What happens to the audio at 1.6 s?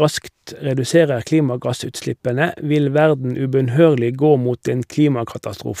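Nothing goes wrong at 1.6 s; the speech continues intact through that moment with no audible fault.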